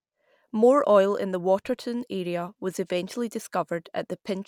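A short speech recording with no audible technical faults anywhere in the signal.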